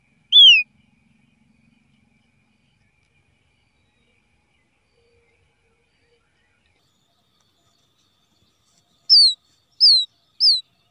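From the start to 6.79 s, everything sounds sluggish and dark: the sound is slowed to about two-thirds of its proper speed and sits roughly seven semitones too low. This is a wrong sample rate fault. The samples are clocked out more slowly than they were captured, with no conversion, so timing and pitch drop together by the same ratio. A 2:3 ratio fits 48 kHz material being played at 32 kHz.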